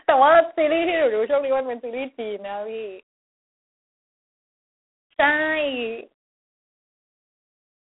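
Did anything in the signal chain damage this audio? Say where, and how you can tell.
Yes. G.726 ADPCM coding damage runs through the entire speech clip, introduced at the codec stage. Nothing sits above about 3.8 kHz, and the band is held to a telephone line's 300 Hz to 3.5 kHz. A harsh, rasping hiss rides on the speech, rising and falling with its level, which fits G.726 at 24 kbit/s. At that rate each sample carries only three bits of difference from the adaptive prediction, so the quantisation error is plainly audible.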